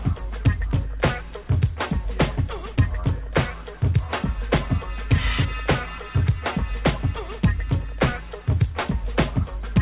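No technical faults are audible.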